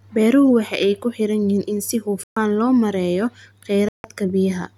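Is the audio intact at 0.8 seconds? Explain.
Yes, at 0.8 seconds the speech plays through cleanly with no audible fault at that moment.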